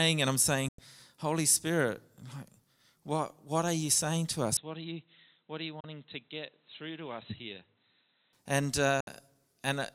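Right after "and I'm", at 0.68 s, there's a digital broadcast dropout. The audio fades out in about 3 ms and stays muted for roughly 96 ms, which fits about three lost frames failing to decode. At 4.57 s, just after "are you saying to", the sound turns dull and boxy with no gap. Nothing comes through above 4 kHz, the level drops noticeably, and a faint new noise floor appears. That points to the input likely being switched to a poorer device, and it clears at 8.33 s. Two more dropouts follow, 32 ms at 5.80 s and 64 ms at 9.00 s, each about one and two frames' worth of silence.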